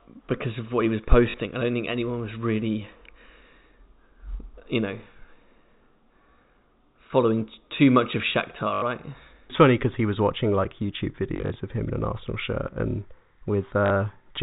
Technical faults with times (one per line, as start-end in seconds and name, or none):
1.30-1.34 packet loss with last packet repeated
8.74-8.82 packet loss with last packet repeated
11.36-11.56 packet loss with last packet repeated
13.86-13.90 packet loss with last packet repeated